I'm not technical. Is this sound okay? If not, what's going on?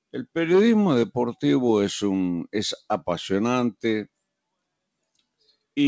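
Yes, no faults can be heard.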